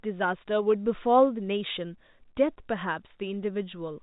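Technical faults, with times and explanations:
No technical faults can be heard in this speech, which is carried by G.711 A-law telephone coding at 64 kbps and shows the expected telephone band with nothing above 4 kHz.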